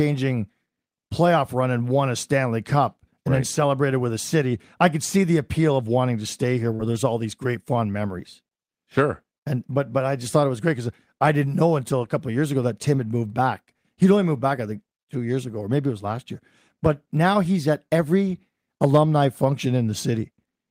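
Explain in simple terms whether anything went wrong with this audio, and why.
At about 6.75 to 6.82 s, right after "wanting to stay here" and before "there's all these great", the speech briefly smears. This is short concealed packet loss: roughly 40 ms of audio arrived too late, and the receiver patched the gap by stretching the preceding sound.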